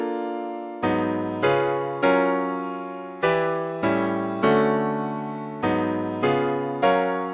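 No technical faults are audible.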